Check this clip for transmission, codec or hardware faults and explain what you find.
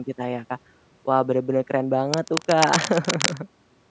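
One hardware fault is present. From 2.11 to 3.37 s, cable scratch noise appears: dense, irregular crackling, nearly as loud as the speech, most likely from a worn cable or connector being moved.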